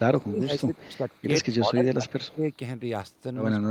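The speech repeatedly dips, falling by roughly 20 dB at its lowest across about 0.06–1.08 s and again across 1.48–2.44 s. This is speech suppressed in double talk, likely an echo canceller muting the local talker while the far side spoke. Faint repeats trail the voice by 151 ms at 0.59–0.97 s (around 25 dB down), 1.43–1.55 s and 2.23–2.34 s (around 30 dB down). That is echo leak, likely loudspeaker pickup the canceller failed to remove and sent back.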